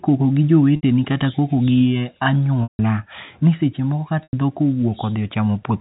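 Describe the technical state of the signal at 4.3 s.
At 4.3 s there's packet loss with pitch repetition from 4.23 to 4.33 s. About 100 ms of speech drops out, which fits ten 10 ms packets. The receiver loops the last pitch period and fades it to silence before the speech cross-fades back.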